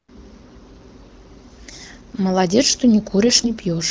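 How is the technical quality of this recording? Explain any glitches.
The recording has one brief glitch near the end, heard over the light coding damage of the AMR wideband (HD Voice) path at 12.65 kbit/s.

From 3.26 to 3.50 s, AMR bit errors hit: flipped low-priority bits at around 7 percent misplace excitation pulses and skew pitch, gain and spectrum, so speech turns scratchy and gargly, consistent with roughly ten damaged frames.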